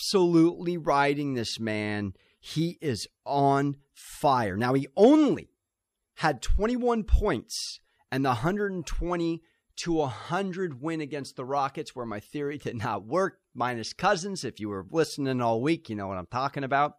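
No technical faults can be heard in this recording. Nothing in the signal path draws attention to itself at any point in the audio.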